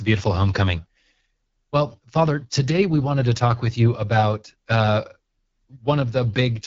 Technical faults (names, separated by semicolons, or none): AMR wideband (HD Voice) codec